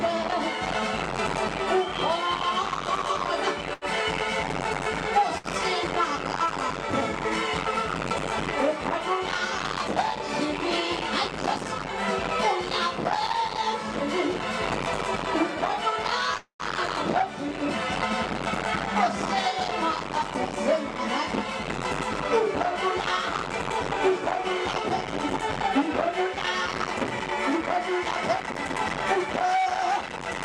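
Around 3.73 to 3.85 s and again at 5.38 to 5.47 s you get a short stall from a late packet. A packet didn't turn up in time, the jitter buffer emptied, and the receiver held the last bit of sound for about 82 ms and then 65 ms until the data caught up. Nothing is lost. The sound just hangs a beat too long with a slight buzz or dip, then carries on where it left off.

At 16.37 s there's a call audio freeze lasting to about 16.62 s. The sound sticks into a fading buzz or hiss for roughly 220 ms, and about 120 ms of that tails off into silence before the audio resumes. It likely comes from packets getting held up in transit long enough to drain the buffer, with the receiver bridging the wait. Playback picks up from the same point, so it's an inserted gap rather than a chunk missing.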